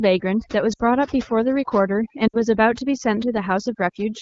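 Overdone noise removal runs through the whole speech clip: bands near the noise floor are pulled down hard, leaving near-silent gaps with twinkling specks rather than steady hiss. Lost AMR speech frames hit at 0.74 to 0.81 s and 2.27 to 2.42 s, each about 60 ms of concealment. The decoder reuses the last good settings at falling gain, so the voice smears and fades briefly rather than clicking or cutting dead. The wideband codec otherwise keeps the speech clear.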